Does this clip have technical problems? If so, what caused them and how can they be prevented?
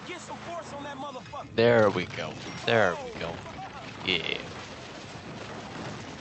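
No, this clip has no technical problems, so there is nothing to prevent.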